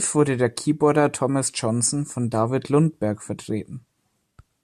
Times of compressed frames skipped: none

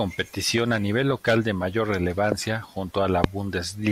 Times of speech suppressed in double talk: none

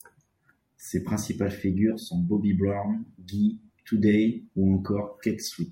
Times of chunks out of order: none

